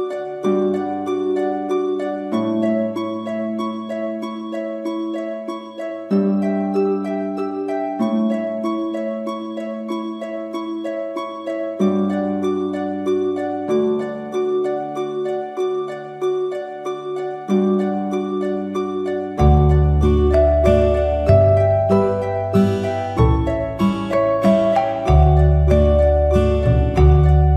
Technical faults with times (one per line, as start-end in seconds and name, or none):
none